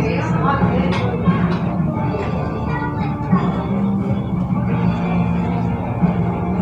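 No technical faults are audible anywhere in this recording of sounds.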